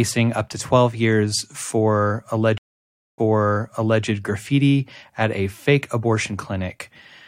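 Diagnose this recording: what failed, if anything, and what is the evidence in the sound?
A stream reconnect, at the network stage. After "years for", sound cuts out at 2.58 s for 0.6 s of silence. It resumes at "graffiti at a fake", 0.86 s earlier, so material repeats. The player reconnected and restarted its decoder mid-stream. Recovery ends by 4.04 s.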